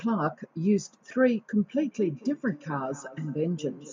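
From 1.64 s to the end of the clip, the speech suffers feedback echo between two devices. A second device's loudspeaker feeds this microphone, which its echo canceller cannot remove. The copy returns roughly every fifth of a second, at about 18 dB below the speech.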